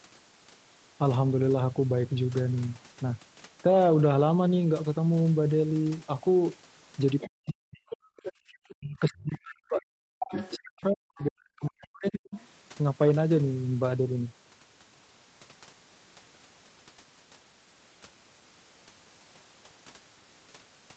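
Around 7.2 s a brief scrap of the other side's voice leaking through pops up, roughly 15 dB under the talker. That's most likely loudspeaker echo the echo canceller didn't fully scrub from the mic. Right after, from 7.26 to 7.93 s, the talker gets chopped down hard, something like 40 dB at the deepest. That's speech suppressed in double talk: with both sides going at once, the canceller probably couldn't tell the talker from the echo and pulled everything down.

The leak comes back from 7.9 to 8.33 s, again around 15 dB down. The instant it stops, 8.33 to 8.44 s, the room sound drops out by about 31 dB for roughly a tenth of a second. That's background gated by the echo canceller: it slams the mic down while the loudspeaker plays, then lets go, so you hear a little hole in the ambience.

Then the long one. From 8.72 to 12.35 s the talker is suppressed on and off for about 3 s in total, with dips as deep as roughly 40 dB, again likely a double-talk clamp. 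Leaked far-end voice sneaks in at 10.2–10.59 s, fairly prominent at around 10 dB down. It's barely there at 11.17–11.26 s, around 30 dB down, and faint again at 11.85–12.47 s, around 25 dB down. Likely the same incomplete echo cancellation behind each of those.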